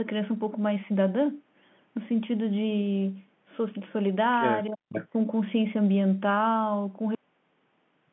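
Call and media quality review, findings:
Speech suppressed in double talk, 4.69–4.92 s: level dips by roughly 40 dB across about 200 ms. On the waveform the envelope collapses, and the spectrogram shows a near-blank gap. Likely the echo canceller ducking the near talker during overlapping speech.

Echo leak, 4.89–5.09 s: a delayed copy of the speech arrives 378 ms late, only a few dB below the direct signal. The spectrogram shows repeated harmonic traces offset in time. Likely residual from a loudspeaker path that the canceller failed to remove.

Cut-off end at 7.15 s: audio stops mid-sound and drops to flat digital silence with no decay tail. The waveform shows an abrupt edge into silence, and the spectrogram goes empty. The final buffers were never written or played out.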